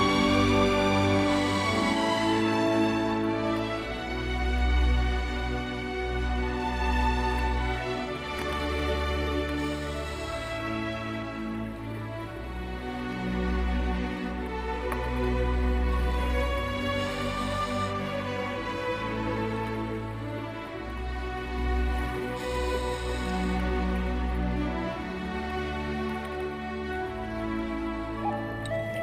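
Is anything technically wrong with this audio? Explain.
Yes. From the very beginning until 1.94 s, everything is heard twice: a second, quieter copy trails the original by about a fifth of a second, making a flat double that stops abruptly at 1.94 s. This is a doubled audio track. The trailing copy is full-band and carries no decay or room colour, so it isn't an acoustic echo; it is likely the same signal captured again through a slower path and mixed back in.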